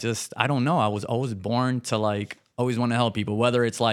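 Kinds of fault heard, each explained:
No technical faults can be heard in this recording.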